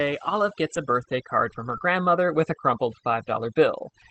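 Across the whole recording there is overdone noise removal: the suppressor was set too aggressively and drives individual frequency bands down or off whenever they sit near its noise estimate. The background breaks into twinkling, warbling specks and quiet parts of the speech go with it. On a spectrogram this looks like isolated flickering dots and holes in the noise floor.

At 1.69 to 1.71 s, between "a birthday card from" and "grandmother with a crumpled", a lost packet was rebuilt from error correction. About 20 ms was played from the low-bitrate copy carried in the next Opus packet, so there is no gap, but the sound turns briefly rougher and noisier. On a spectrogram it appears as a short smeared, grainy patch, and the waveform stays continuous. The call path's Opus coding at 8 kHz bandwidth caps the spectrum at that frequency throughout.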